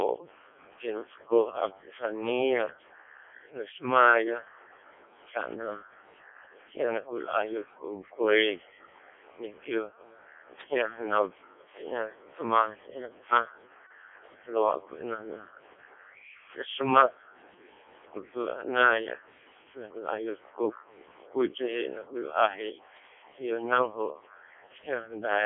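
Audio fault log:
Throughout: Codec 2 vocoder. The speech sounds robotic and buzzy, with nothing above 3.5 kHz. At about 0.7 kbit/s the voice is rebuilt from sine waves, not kept.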